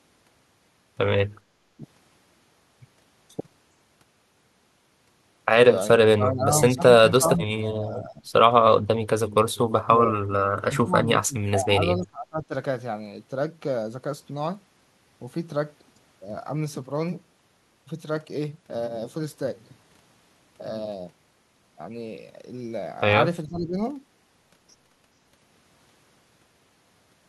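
At 1.78, 6.07–6.57, 6.75–6.82, 7.06–8.32, 9.01–11.75, 11.97–12.53 and 23.47–23.77 s the speech dips, from a slight 5 dB to roughly 30 dB. This is likely speech suppressed in double talk, where the echo canceller mistook overlapping talk for echo and attenuated it.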